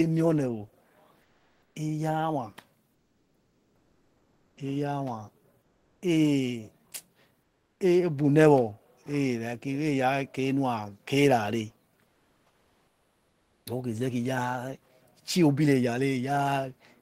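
The sender likely paused transmission during speech gaps, in the manner of Opus discontinuous transmission, leaving the receiver to synthesise comfort noise in place of the background. In this speech clip that happens from 1.22 to 1.75 s, 2.94 to 4.57 s, 5.62 to 6.02 s, 7.42 to 7.80 s and 12.06 to 13.66 s. Each time, the real background, sitting about 42 to 45 dB below the loudest speech, turns into a flat, featureless hiss about 3 to 5 dB quieter until talking resumes.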